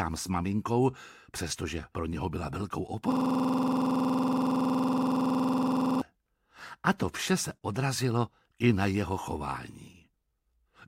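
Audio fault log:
Throughout: clock drift between sender and receiver. The sender's clock runs about 3 percent slow, so the receiver's buffer keeps draining. On a waveform, tiny repeated slivers appear at uneven spacing.
0.20–10.41 s: repeated timing corrections. Short repeated pieces add roughly a third of a second overall. The spectrogram shows small vertical seams at irregular intervals.
3.12–6.01 s: system hang loop. One 46.44 ms piece, which fits a 2048-sample buffer, repeats 62 times, giving a 21.5 Hz stutter. The waveform shows identical blocks, and the spectrogram shows evenly spaced vertical bars.
7.57–7.63 s: short stall from a late packet. The last sound is stretched by 44 ms until the packet arrives, with nothing lost. This appears as a brief flattened, smeared patch with a faint buzz or dip.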